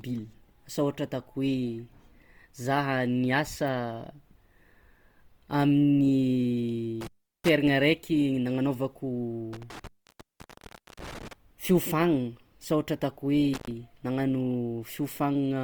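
Across the whole clip the speech has a rough, grainy texture, with plainly audible codec damage that makes tonal parts sound noisy rather than clean. The full bandwidth is kept, up to about 20.2 kHz, so there is little muffling and little swirl. This is likely Opus compression in its music-style mode, which fills bands it cannot afford to code with folded or noise-like content. The sound points to a low bitrate, around 24 kbps.

From 7.01 to 7.49 s the sound drops out or breaks up, with crackle at the edges and hiss during the gap, which lasts about 0.37 s. It happens again, longer, from 9.53 to 11.33 s, with an open stretch of about 1.13 s. A brief third one runs from 13.53 to 13.71 s, open for about 0.10 s. This is intermittent contact: a loose cable or plug briefly opening the signal path.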